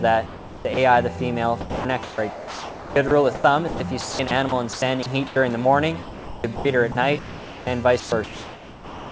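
Sound chopped by the voice detector, likely, across five stretches: 0.26 to 0.77 s, 1.61 to 5.36 s, 6.02 to 6.65 s, 6.92 to 7.67 s and 8.00 s to the end. Roughly 0.4 to 1.7 s at a time drops out to comfort noise, so the sound cuts choppily.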